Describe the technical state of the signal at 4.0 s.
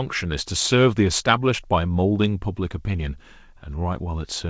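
At 4.0 s the speech comes through intact, carried over the call path with the G.722 codec's usual band limit, so nothing is heard above 8 kHz.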